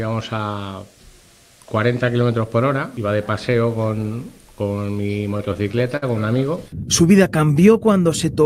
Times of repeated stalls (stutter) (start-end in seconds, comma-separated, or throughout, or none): 5.37-6.59